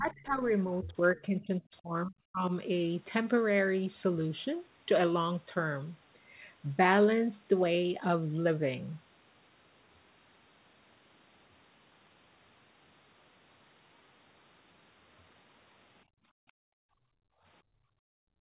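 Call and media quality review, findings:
Speech suppressed in double talk, 0.00–2.52 s. Talker's level dips intermittently, about a second and a half in total, deepest around 30 dB. Probable component: echo canceller. Likely cause: both ends talking at once, so it could not separate near talker from loudspeaker echo and attenuated both.

Background gated by the echo canceller, 16.05–17.45 s and 17.62–18.42 s. Room sound drops out, by about 38 dB at deepest, while the loudspeaker plays. It returns briefly around 17.5 s when the canceller releases, then gates again to the end. Audio band stops at 4 kHz, consistent with a narrowband G.711 call path.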